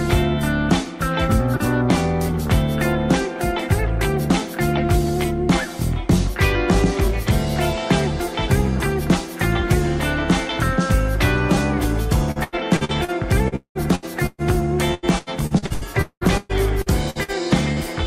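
From 12.31 to 13.11 s there is repeated packet loss, giving a robotic sound. Packets kept arriving late or not at all. Each hole was patched by extending the last sound. Five gaps occur here, the longest 89 ms. About 31% of the stretch is filled-in audio. It returns from 13.48 to 14.41 s, with four gaps covering about 45%, the longest 193 ms. A third run spans 14.94 to 17.31 s. It has twelve gaps filling about 34%, the longest 196 ms. The result is choppy, with pieces missing.

At 17.72 to 17.79 s comes a short concealed packet loss. About 40 ms never reached the decoder in time. The receiver continued the last sound, from its pitch if voiced or as shaped noise if not. It then blended back into the real audio. This one is isolated and brief. It is heard as a quick smear or wobble rather than choppiness.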